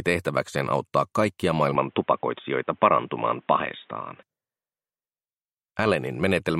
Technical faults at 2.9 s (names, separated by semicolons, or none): input switched to a poorer device